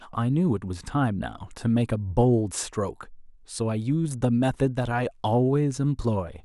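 Nothing goes wrong anywhere in this bit of speech, so there's no technical fault to point to.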